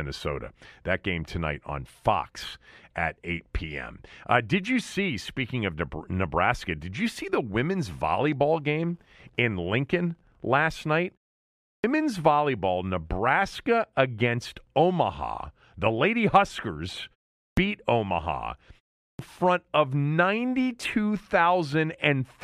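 At 11.65 s, 17.39 s and 19.03 s, speech resumes with its opening cut away. Each is a clipped start after a pause. The output device idles in the gap and wakes late. About 188, 183 and 162 ms are lost. Words jump in abruptly.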